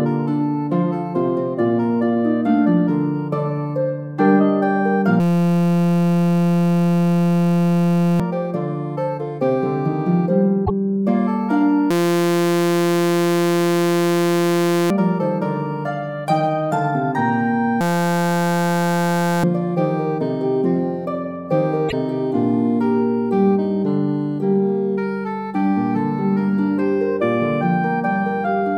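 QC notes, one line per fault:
5.20–8.20 s, system hang loop: the sound freezes into one 5.8 ms fragment repeated about 516 times, a steady buzz at 172 Hz. The repeat length points to a 256-sample ring buffer cycling while the system stalled, so about 3 seconds of audio never arrives. On a spectrogram this shows as flat harmonic lines at multiples of 172 Hz; the waveform repeats identically.
10.65–10.70 s, broken MP3 bit reservoir: a garbled glitch about 60 ms long, after which the audio jumps ahead. The likely cause is missing MP3 frames of 26.1 ms each, so the next frames fetch borrowed reservoir bytes from the wrong place and decode as junk. On a spectrogram this looks like a brief smear or gap two frames wide.
11.91–14.90 s, system hang loop: the same 5.8 ms loop and 172 Hz buzz return, repeating about 516 times and again swallowing about 3 seconds of audio. This fits the 256-sample buffer looping during a stall. 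On a spectrogram it shows as rigid horizontal harmonic bands; the waveform is an unchanging periodic pattern.
17.81–19.44 s, system hang loop: a shorter freeze of about 280 repeats of the 5.8 ms fragment, buzzing at 172 Hz, with about 1.5 seconds lost. The same stalled ring buffer cycles until playback recovers. The spectrogram shows static harmonic stripes; the waveform is a frozen repeating cell.
21.88–21.93 s, broken MP3 bit reservoir: another roughly 55 ms garbled glitch with a jump forward in the audio. It likely comes from dropped 26.1 ms MP3 frames leaving the following frames reading another frame's reservoir data. On a spectrogram it is a short broadband disturbance or hole, and the waveform shows a discontinuity.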